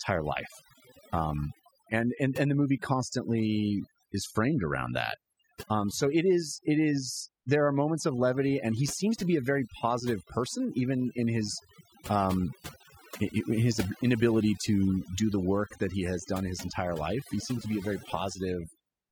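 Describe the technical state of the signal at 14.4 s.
At 14.4 s the signal shows overdone noise removal, present across the entire clip rather than at this moment alone. A noise reduction stage was driven too hard: any frequency band sitting close to its noise estimate gets pushed down sharply or shut off, and the softer parts of the speech are caught along with the noise. The result is a lowered background broken up into twinkling, warbling specks.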